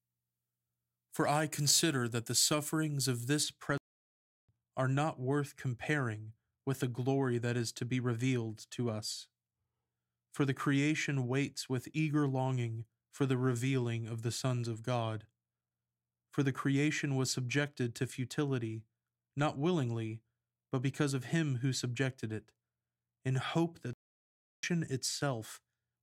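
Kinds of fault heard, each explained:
Pre-emphasis left on: For the first 3.4 seconds the speech has a treble boost whose matching cut was never applied. The boost follows a 50-microsecond FM curve, so the highs rise steadily above about 3 kHz. At 10 kHz they stand about 11 dB higher than at 1 kHz. The speech sounds thin, bright and hissy. Sibilants are sharp and pushed forward. After 3.4 seconds the tonal balance changes as this boost ends.
Playback stall: The speech stops in mid-flow and goes silent twice. The first gap runs from 3.78 to 4.49 seconds, about 0.71 seconds. The second runs from 23.93 to 24.63 seconds, about 0.70 seconds. The likely cause is the player running short of data or its audio thread being held up. Output resumes only once it recovers.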